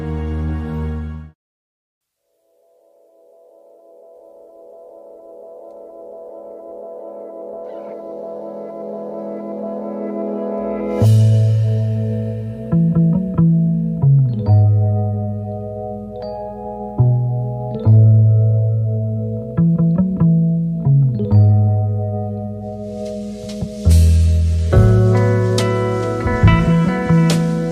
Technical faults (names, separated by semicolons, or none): none